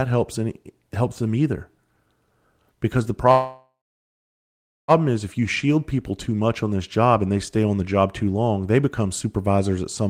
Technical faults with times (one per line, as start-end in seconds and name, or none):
3.31-4.91 call audio freeze